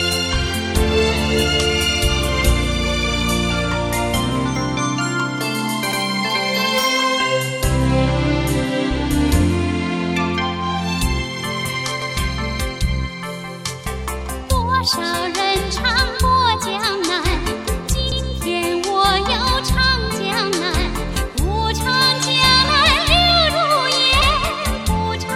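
Overlapping chunks: every 6 s, at 5.92, 12.02, 18.12 and 24.22 s, a 100 ms slice replays, unlike a dropout, where the audio would vanish instead.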